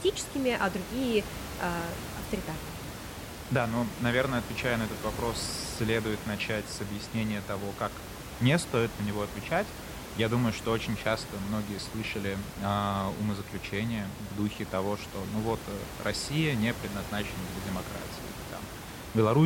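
Speech recording with room background sitting about 10 dB under the talker, and no technical faults to report.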